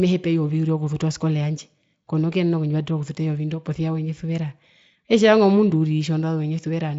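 Nothing goes wrong anywhere in this speech clip, so there's no technical fault to point to.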